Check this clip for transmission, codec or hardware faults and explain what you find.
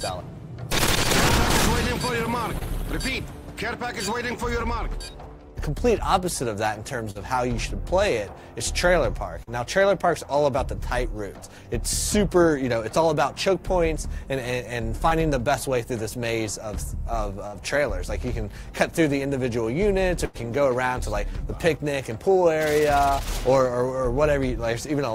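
The clip has two kinds of network fault: four short concealed packet losses and two longer bursts of packet loss.

Short concealed packet loss occurs at 2.59–2.63 s, 7.11–7.17 s, 9.43–9.49 s and 15.09–15.13 s. Between 20 and 40 ms of audio never arrived in time, and the decoder papered over each hole by extending the preceding sound before crossfading back. Each one is heard as a brief smear or wobble. On a spectrogram, the harmonics or noise just before the gap stretch flat and repetitive, without the usual fine movement. The waveform shows a short, overly regular stretch.

Burst of packet loss occurs at 17.47–17.55 s and 20.25–20.37 s, removing about 60 ms and 100 ms respectively. Consecutive packets were lost, so the receiver kept extrapolating the last sound while fading it down. That produces a held buzz or fading hiss, and then the audio jumps ahead with that stretch missing. On a spectrogram, frozen horizontal bands dim toward the right before an abrupt restart. 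The waveform envelope decays smoothly and then snaps back.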